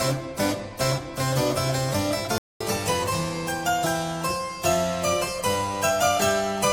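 At 2.38 s the sound cuts out abruptly and stays silent until about 2.61 s, a gap of roughly 225 ms, before carrying on. This is a playback stall, most likely the player running short of buffered data or having its output thread held up. What marks it as a stall rather than a brief dropout is its length. A dropout is a momentary hole of a few milliseconds, heard as a tick. This is a clean, clearly audible pause that interrupts the flow mid-stream.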